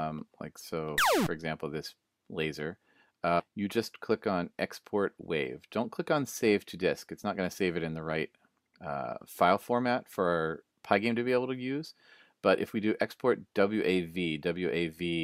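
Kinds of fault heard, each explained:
Skip ahead: At 3.39 s the audio jumps forward abruptly, with no pause or fill, and the material on either side is butted together almost seamlessly. Something like 0.4 s of sound is simply gone. The stretch was dropped while later audio was already queued, either lost in transit or discarded when the jitter buffer overflowed, so playback resumed from the newer audio and the overall delay shrank by that same amount.
Jitter buffer speed-up: From 3.49 s to 4.64 s the sound runs noticeably quicker, about 108% of normal speed, yet its pitch stays where it was, giving a slightly hurried, compressed feel. The receiver's jitter buffer was holding more audio than its target, so it trimmed many tiny slices, each one or a few pitch periods long, one after another. Together they removed roughly a tenth of a second to bring the delay back down.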